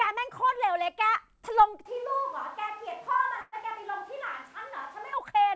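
A short speech recording where, from 1.86 s to 5.13 s, the voice suddenly turns roomy and hollow, loses bass and drops about 5 dB, while background noise rises to around 30 dB below the speech. The abrupt change in and out points to a switch to a distant microphone, likely because the close microphone's signal dropped and a farther pickup, such as a camera's, filled in. Within that stretch, at 3.41 s, the sound stalls for about 113 ms as a fading buzz or hiss rather than silence, then resumes exactly where it left off with nothing lost. This is a call audio freeze, likely from delayed packets emptying the jitter buffer so the receiver stretched the last sound until the data arrived, leaving a 113 ms pause inserted into the flow. The call codec limits the whole clip to nothing above 8 kHz, which fits a wideband codec such as G.722.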